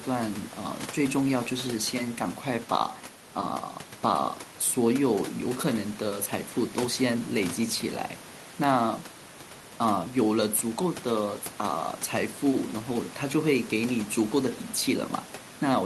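Speech recording with no technical faults detected; the steady room noise sitting about 14 dB below the speech belongs to the recording space, not the signal chain.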